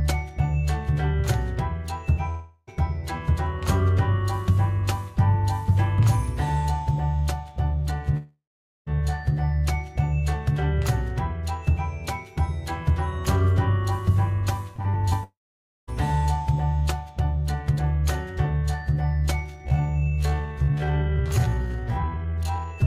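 A long network dropout at 2.29 to 2.69 s likely left about 0.38 s of audio missing. The receiver bridged the whole gap by carrying the last sound on as a fading buzz.

Another long network dropout at 8.17 to 8.88 s likely lost 0.7 s. The patched sound fades out, leaving roughly 0.45 s of silence before the audio resumes further on.

Repeated packet loss (robotic sound) runs from 14.76 to 15.13 s. Four short holes, the longest 41 ms, are each patched in turn, covering about a quarter of the stretch with choppy filler.

A long network dropout at 15.24 to 15.89 s likely cost 0.64 s. The filler fades into about 0.53 s of silence, and the audio returns without the lost part.

A time-stretched section runs from 19.44 s to the end, likely slowed to 0.54 times normal speed. The pitch is held while the pace drops abruptly, so the sound drags.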